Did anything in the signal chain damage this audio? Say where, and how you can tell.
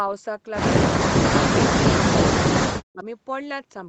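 Yes. From 0.95 to 1.53 s and from 2.68 to 3.06 s, the speech dips and breaks up, at worst by about 40 dB. This is likely speech suppressed in double talk, with the call's echo canceller muting its own talker. A spectrogram shows gaps in the energy, and the waveform shows chopped envelopes.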